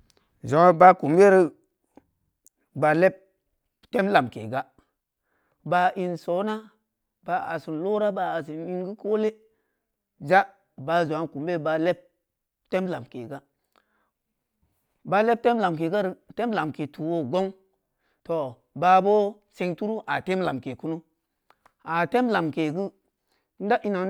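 Listening closely to the speech recording, nothing stood out as a technical problem at any point.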